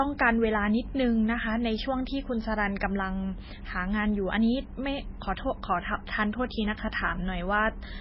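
A speech recording with heavy MP3 compression running throughout, likely from a very low bitrate encode, which fits something around 16 kbps. Nothing survives above 5.6 kHz, so sibilants lose their edge, and the remaining spectrum sounds watery and swirly as weak frequency lines drop in and out from frame to frame. That flickering, together with smeared onsets, is what separates it from a simple low-pass filter, which would dull the top without any swirl.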